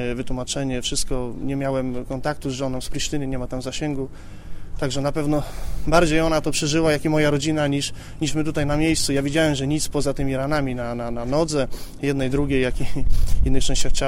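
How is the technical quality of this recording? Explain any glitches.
No glitches are present, and the signal holds steady and continuous throughout with nothing disrupting the recording.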